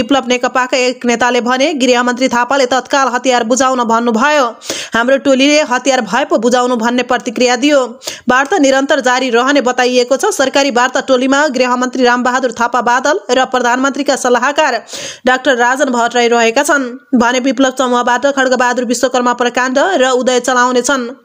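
Gain pumping runs through the whole clip, a swing of around 10 dB. This is likely input gain set far too high with a fast limiter clamping down, squashing loud and soft together. A noise gate, by contrast, would silence the gaps instead.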